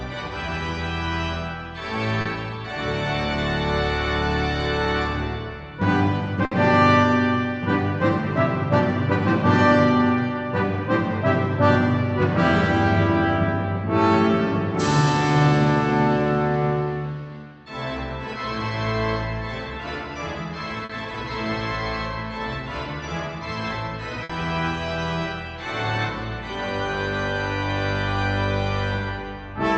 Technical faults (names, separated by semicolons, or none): short concealed packet loss; burst of packet loss